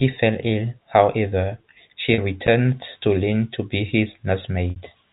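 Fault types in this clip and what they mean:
Packet loss with pitch repetition: at 2.14 to 2.18 s, between "fell ill however she" and "returned to", and again at 4.70 to 4.76 s, audio went missing for 40 ms and then 60 ms. The receiver filled each gap by repeating the last pitch period while fading it out. The first gap sounds like a briefly held, buzzy tone. The longer second gap outlasts the fade and dips toward silence before the sound cross-fades back, all over the narrow telephone band of G.711.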